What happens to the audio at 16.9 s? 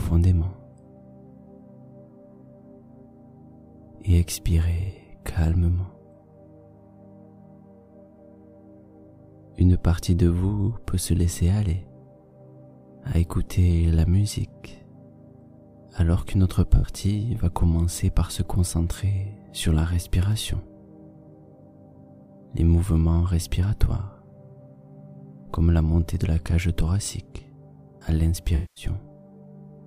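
Around 16.9 s there is a brief AAC frame loss with concealment, from 16.75 to 16.89 s. About 85 ms of coded audio went missing, which fits four lost AAC frames. The decoder papered over the gap by reusing the last good spectrum. The result is a short smeared, noisy or phasey patch rather than a clean dropout.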